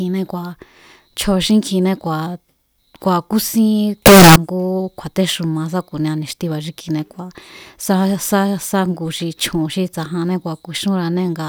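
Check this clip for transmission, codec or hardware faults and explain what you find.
One fault: a float read as integer burst in the speech from 4.06 to 4.36 s, just before "ngú kju̱a̱téxuma sáku̱nia ni̱xtiba̱". For 0.3 s the audio turns very loud and harsh, with background noise as loud as the speech, though pitch stays traceable. The likely cause is 32-bit float samples interpreted as 32-bit integers, so sign and exponent bits dominate the value. On a waveform this shows as a near-square block at an almost fixed, high level. A spectrogram shows a broadband bright band across all frequencies.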